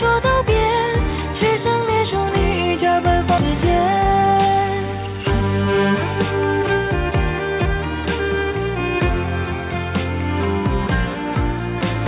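At 3.38 s the sound lurches forward with no gap, and roughly 0.7 s of material is simply gone, its two sides butted together. This is a skip ahead: a late stretch of audio was discarded while newer audio already waited, cutting the delay by about as much.

From 3.90 to 5.14 s the sound runs hurried, at about 118% speed, yet holds its pitch. This is a jitter buffer speed-up: with too much audio queued, the receiver trimmed many short pitch-period slices, roughly a fifth of a second in total, to shrink the backlog.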